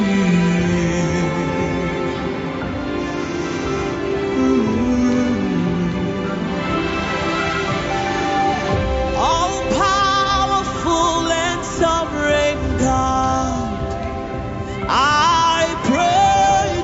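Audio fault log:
Nothing wrong turns up here, just the normal sound of a call, with everything above about 8 kHz trimmed away as the call path expects.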